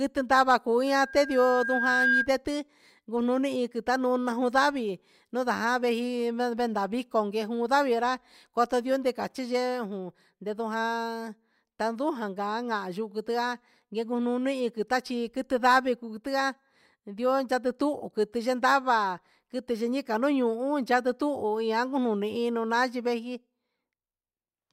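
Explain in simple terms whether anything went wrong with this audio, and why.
Just after "ndava cuu", a loudspeaker feedback squeal runs from 0.87 to 2.29 s. The microphone heard its own speaker, so a 1.6 kHz tone swelled.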